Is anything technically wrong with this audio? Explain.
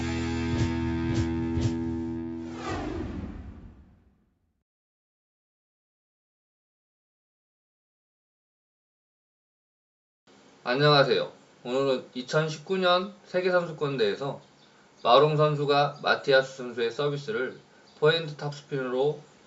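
No, nothing is technically wrong: the audio shows the normal 8 kHz bandwidth ceiling of a call microphone chain and WebRTC codec path, which is expected behaviour rather than a defect.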